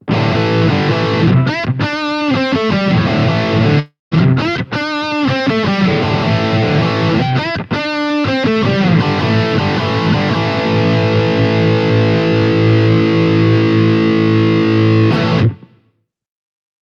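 At about 3.79 s the sound cuts out and what's left smears into a fading buzz, then drops to silence before resuming near 4.14 s with roughly 320 ms missing. That's likely a long network dropout, with the receiver padding the gap until it gave up.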